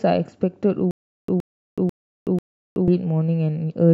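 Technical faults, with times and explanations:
0.91 to 2.88 s, stutter with silent gaps: The same short burst of speech, about 118 ms long, plays four times. Each repeat is followed by about 375 ms of dead digital silence. So the burst returns at an even pace, once every 492 ms. This likely comes from playback stalling, with each retry replaying the last fragment before running empty. Whatever speech belonged in those two seconds is missing and never heard.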